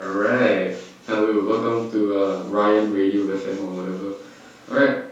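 No technical faults occur at any point in this speech recording.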